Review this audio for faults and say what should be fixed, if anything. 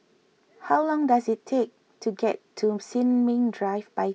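No faults can be heard anywhere in this speech recording. Nothing needs fixing, and no preventive step is called for.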